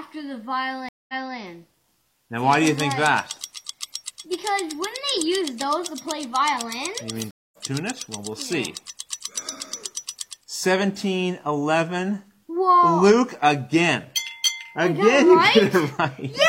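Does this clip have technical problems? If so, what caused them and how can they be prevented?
Yes. Two stream reconnects: at 0.89 to 1.36 s, a 200 ms silence, then the audio resumes 279 ms earlier; at 7.31 to 7.58 s, a 219 ms silence, then it resumes about a fifth of a second later. Each time the connection dropped and a fresh decoder restarted mid-stream. Deeper client buffering and a more stable network link would prevent this.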